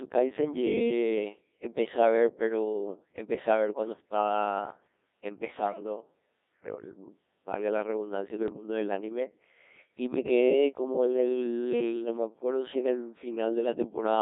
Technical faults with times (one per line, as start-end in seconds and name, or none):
0.00-14.21 Codec 2 vocoder
8.48-8.63 bit errors on digital voice radio